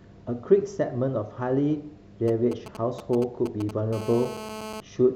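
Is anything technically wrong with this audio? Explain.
Yes, a nearby mobile phone interferes with the speech in two stages.

From 2.28 to 3.94 s there are GSM signalling bursts: a galloping dit-dit-dit of brief buzzes, roughly 10 dB below the speech. A 2G handset sends short groups of radio pulses while signalling, and the audio circuit rectifies them into audible clicks at a 217 Hz rate.

From 3.94 to 4.80 s the pattern becomes a steady GSM phone buzz: a hard, raspy 217 Hz tone rich in harmonics, unrelated to the speech, about 12 dB below it. Once the call is established, the phone transmits in bursts 217 times per second, and the rectified pulses become an unbroken buzz.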